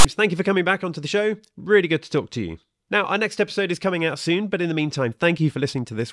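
From 0 to 0.05 s, before "thank you for coming", a harsh rasp with hard edges shows file tags played as audio. A block of text metadata at the head of the file has been decoded as if it were samples, so the character bytes come out as a loud, buzzy grating pushed off to one side. That lopsided, textured rasp sets it apart from a plain click or a full-scale noise burst, which would be symmetrical and hiss-like.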